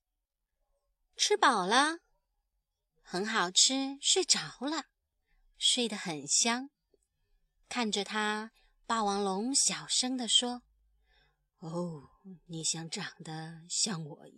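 No dropouts, glitches, distortion or level jumps turn up anywhere in the speech; nothing to flag.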